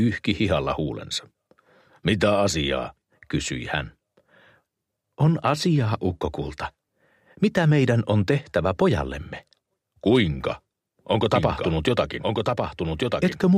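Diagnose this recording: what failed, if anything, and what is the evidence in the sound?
A doubled audio track appears at 11.36 s and runs to the end. From that point a second full-band copy of the sound trails the original by roughly one second. It sits about 5 dB below it. The copy carries no reverb tail or room colour, and it starts abruptly. The likely cause is a second, slower capture or monitoring path being mixed into the recording, at the driver or routing stage.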